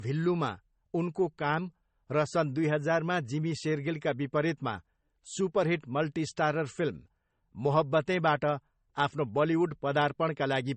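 Transcoding between lossy codecs, throughout: speech ends abruptly at 8.4 kHz, with the artefacts of both codecs heard together, likely a low-bitrate MP3 re-encoded to AAC.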